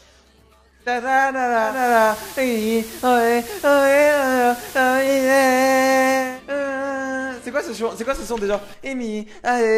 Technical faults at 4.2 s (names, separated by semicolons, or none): digital radio blending to analogue